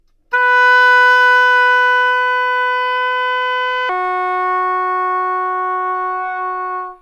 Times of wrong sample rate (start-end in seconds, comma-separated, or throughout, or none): 3.89-7.01